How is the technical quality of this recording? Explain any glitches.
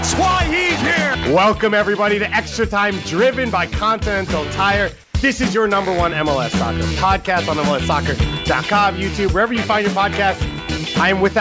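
There is one brief glitch, heard against a low background, about 35 dB below the loudest parts, with nothing above 8 kHz, as the call codec allows.

At 5.04 to 5.14 s the background is replaced for 100 ms by a smooth, featureless hiss, about 2 dB quieter. This is likely comfort noise in place of the background: the sender's activity detector judged the input silent and paused transmission, so the receiver filled the gap with synthetic noise.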